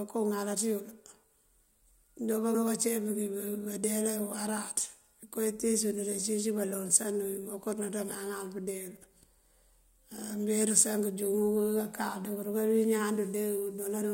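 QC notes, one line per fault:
2.54 s, damaged data in a compressed stream: a short blip cuts sharply into the speech. Corrupted bytes in the compressed data made the decoder misread the frame at that point, lose sync and pick up again at the next valid frame header.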